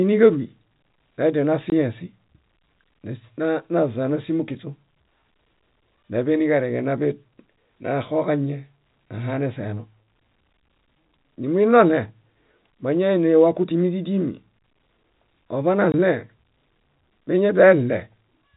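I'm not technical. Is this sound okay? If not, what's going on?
No. The speech briefly drops out twice, at about 1.7 s and 15.92 s, each a tiny hard-edged gap. This is packet loss filled with silence: a 20 ms chunk of audio went missing in transmission and was replaced with nothing, on top of the normal muffled telephone sound.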